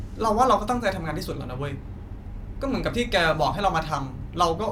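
No technical faults can be heard anywhere in this speech recording. Nothing in the sound breaks up, drops out or gets cut short at any point.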